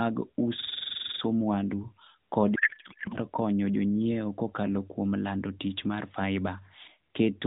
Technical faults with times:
0.60-1.21 system hang loop
2.56-3.18 codec payload misread

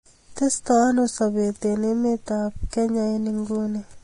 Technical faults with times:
0.00-4.03 Vorbis compression

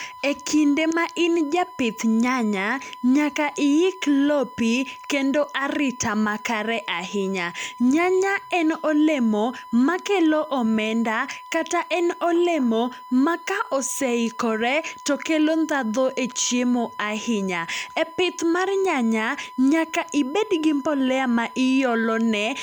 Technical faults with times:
0.00-22.62 USB whine

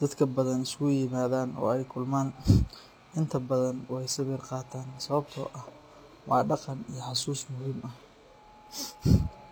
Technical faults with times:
0.00-9.52 transcoding between lossy codecs
0.00-9.52 sample clock jitter

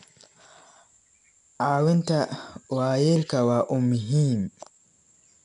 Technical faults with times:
0.00-5.44 4-bit ADPCM compression

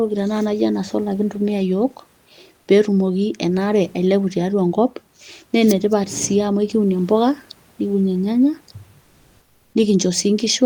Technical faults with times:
9.03-9.71 comfort noise in place of the background

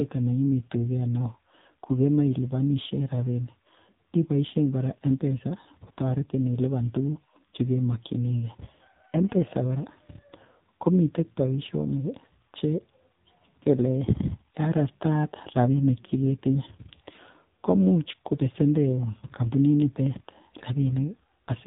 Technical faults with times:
0.00-21.67 AMR narrowband mobile codec

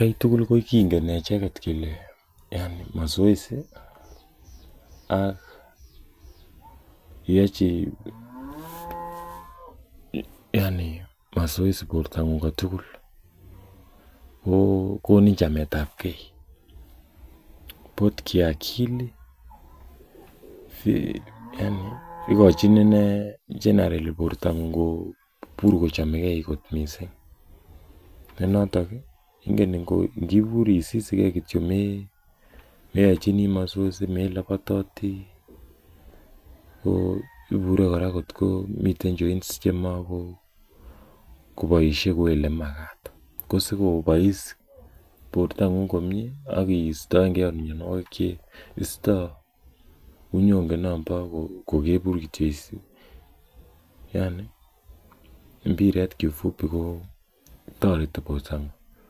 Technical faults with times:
none

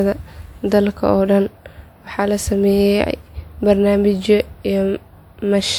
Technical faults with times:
0.00-5.78 generation loss

